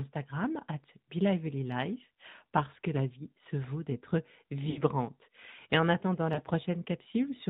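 From the start, the speech carries the sound of the AMR narrowband mobile codec. Nothing above 4 kHz gets through, so the voice is dull and boxed in. The codec rebuilds each frame from a vocal tract model driven by a few pulses. At this clip's quality, the damage is plainly audible as a buzzy, synthetic edge, which fits a mid rate near 10.2 kbps.

At 4.70 s, lost AMR speech frames break in until 4.82 s. The decoder reuses the last good pitch and tract settings with falling gain. The sound smears out and sinks for about 60 ms, which points to three frames in a row. Then the voice returns briefly weak. At 6.34 s a second, shorter loss runs to 6.40 s. It suggests a single 20 ms frame and is heard as a quick dip and warble.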